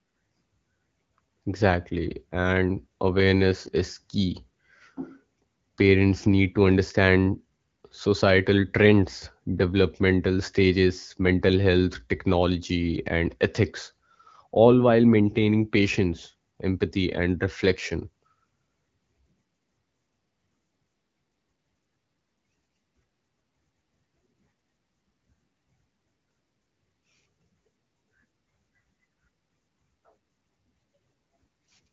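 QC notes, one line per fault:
The speech comes through an AMR wideband (HD Voice) coding path whose clear, light-handed rendering fits the 12.65 kbit/s mode, with the band topping out around 7 kHz as that codec shapes it, and no faults are present.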